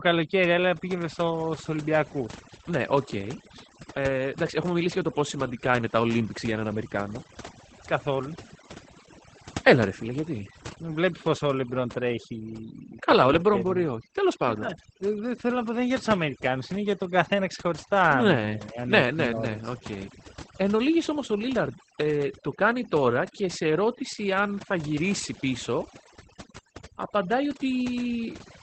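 Overdone noise removal runs through the whole speech clip. The noise reduction was set too strong. It pushes any frequency band near its noise estimate far down or off, and quiet parts of the voice go too. The background sinks and breaks into twinkling, warbling specks.

Opus voice compression also covers the whole clip, in its SILK linear-prediction mode. Nothing sounds above 8.6 kHz, which points to wideband coding. The damage is plainly audible. The coarse excitation coding fits a low rate around 12 kbps.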